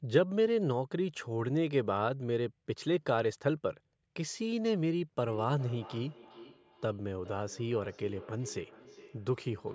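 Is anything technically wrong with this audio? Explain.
Yes. From 5.27 s to the end, there is feedback echo between two devices. Two devices in the same room share the call. One plays back what the other's microphone sent, and that microphone picks it up again. Each echo canceller removes only its own device's playback, so this loop survives. The speech returns at a steady interval of roughly 400 ms. The repeats sound thinner and ringing, peaking at about 19 dB below the speech.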